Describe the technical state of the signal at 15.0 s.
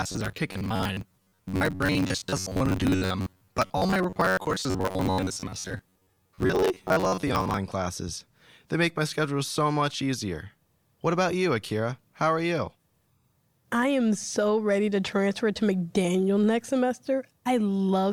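At 15.0 s the speech signal is intact, with no fault present at that moment.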